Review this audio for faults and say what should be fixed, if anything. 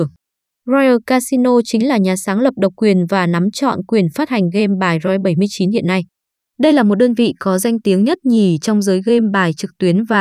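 Nothing in this speech recording needs fixing. No faults can be heard anywhere in it, so there is nothing to correct or prevent.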